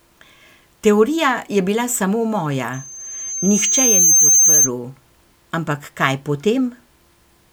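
From 2.73 to 4.7 s, loudspeaker feedback squeal rises at 6.3 kHz. The loop runs away at that frequency, swelling for about a second and a half to sit a few decibels above the speech.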